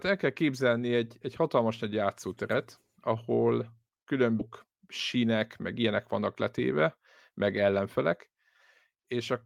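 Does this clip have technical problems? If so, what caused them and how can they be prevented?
Yes. At 4.39 s the speech has a skip ahead: about a second of audio was discarded, likely by an overflowing jitter buffer, and playback jumps forward with no gap. A larger, adaptive buffer and steadier network delivery would prevent this.

From 4.49 to 5.35 s a jitter buffer speed-up plays the speech about 8% fast at unchanged pitch, trimming roughly 70 ms of pitch periods to shrink the excess buffering. Smoother packet arrival and gentler buffer-reduction settings would prevent it.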